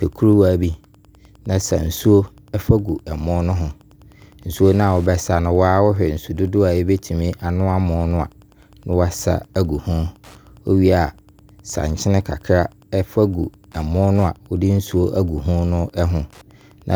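From start to finish, a faint, steady ticking sits underneath the speech, repeating just under ten times a second and lying roughly 40 dB below it. This is Wi-Fi interference: a wireless radio operating close to the audio circuitry transmits its beacon every 102.4 ms, and the circuit rectifies those radio bursts into the audio path, so each beacon turns into a small click that keeps perfect time regardless of what is being said.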